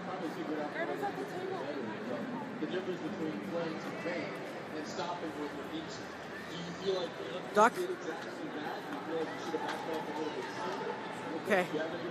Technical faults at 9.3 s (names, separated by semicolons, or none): none